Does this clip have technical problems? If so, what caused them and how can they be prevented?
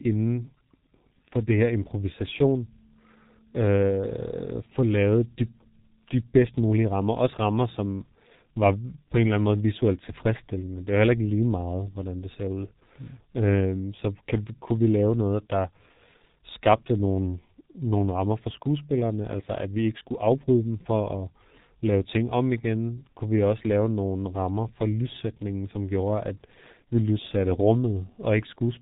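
Yes. Throughout the speech the sound is muffled and hoarse, with nothing above 4 kHz and consonants smeared together. The strength of the damage points to the G.723.1 codec, likely at its 6.3 kbit/s mode. The codec models the voice in 30 ms frames and refreshes that model slowly, so quick changes between sounds blur, and its narrow band removes the upper range entirely. Prevent this by using a wideband codec at a higher bitrate on the call path.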